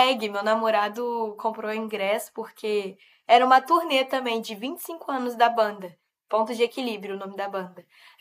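A short speech recording with no technical faults to point to. Nothing in it calls for a time or a cause.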